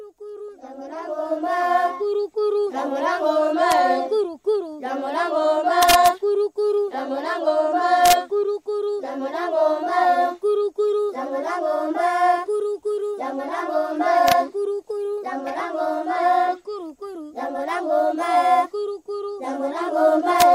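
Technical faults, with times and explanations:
3.72 s, 5.83 to 6.08 s, 8.06 to 8.13 s, 14.28 to 14.32 s and 20.40 s, integer overflow: peaks pushed up to about 1 dB past full scale wrap to the opposite sign instead of limiting, giving violent cracks far sharper than clipping.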